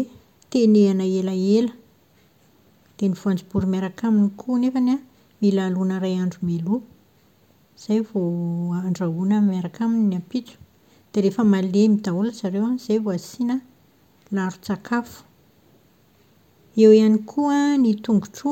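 No technical faults can be heard anywhere in this speech recording.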